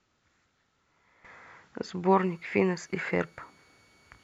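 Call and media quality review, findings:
Switching supply whistle, 2.18 s to end of clip. Faint high tone near 2.2 kHz, drifting slightly (2.23 to 2.25 kHz), roughly 40 dB under the speech. Probable cause: switching power supply in audible burst mode or beating with another supply.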